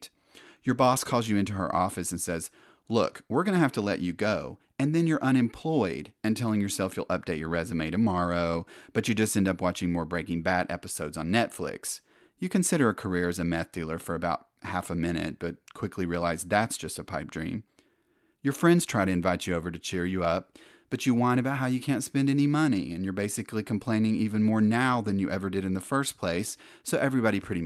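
No technical faults can be heard anywhere in this speech recording.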